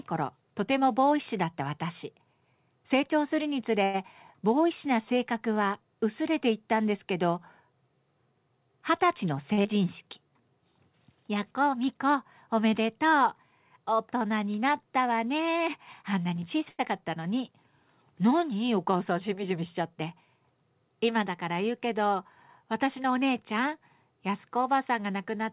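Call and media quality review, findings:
Short stall from a late packet, 3.84–3.96 s, 9.53–9.60 s, 16.69–16.81 s. Jitter buffer ran empty; receiver stretched the last sound for 97 ms, 43 ms and 94 ms. Nothing lost, but each sound is held too long with a slight buzz or dip.

Skip ahead, 9.64–9.66 s, right after the second stall. Audio dropped in transit or by an overflowing buffer while later audio was queued; about 70 ms gone. Playback jumps forward with almost no gap, the two sides spliced nearly directly.

Jitter buffer slow-down, 10.03–10.42 s. Buffer low or target delay just raised, rebuilding reserve by repeating pitch periods; 69 ms added, playback at 84% speed. Speech drawn out at unchanged pitch.

Jitter buffer speed-up, 18.79–19.81 s. Excess buffered audio trimmed by removing short pitch-period pieces; about 70 ms cut, playback at 106% speed. Speech sounds hurried at the same pitch. 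Nothing audible above 4 kHz, which fits a G.711 call path at 64 kbps.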